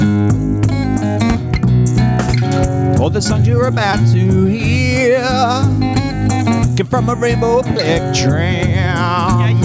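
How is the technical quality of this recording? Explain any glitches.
The recording has one persistent fault: gain pumping, running the full length of the clip. Level rises and falls audibly with the programme material, with the gain swing reaching around 15 dB. The likely cause is input gain set far too high for the microphone, with a fast limiter or compressor clamping down on each peak and releasing in the pauses. The result is squashed dynamics, with loud and quiet passages sitting unnaturally close in level. The top end stops at 8 kHz, consistent with call microphone processing.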